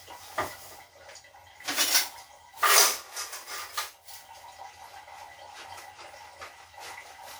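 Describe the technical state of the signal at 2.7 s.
Right at 2.69 s there's a repeated buffer. A tiny slice of audio, about 1.45 ms long (which fits a 64-sample buffer), plays twice back to back because fresh data didn't reach the device in time, so it reran what it already had. With a slice that short you don't get an audible stutter. You hear a click or brief buzz at the hard join, and practically nothing goes missing.

Under that, the sound at this point has a swirly, smeared, hollow character, with transients blurred and nothing above about 20.1 kHz. That's generation loss, most likely from running it through WMA at 96 kbit/s around seven times. Each decode and re-encode quantises again on a shifted frame grid, so the noise keeps piling up beyond what one pass at that bitrate would leave.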